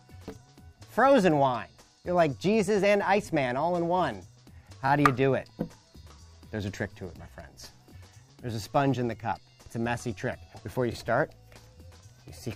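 At 7.90 to 7.93 s and again at 10.93 to 10.95 s, overlapping chunks cause a brief stutter. The audio arrives in 3.0 s chunks, and each starts before the previous one ends. So 23.22 ms plays twice at each join, heard as a click.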